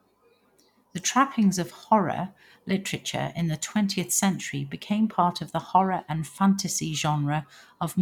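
Speech, with no technical fault to be heard anywhere in the recording. There is no event that calls for a time or a cause.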